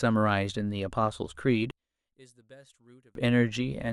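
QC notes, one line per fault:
1.71–3.15 s, one channel inverted: likely reversed polarity on one stereo side cancels the shared centre in mono, so speech drops about 32 dB to a faint residue.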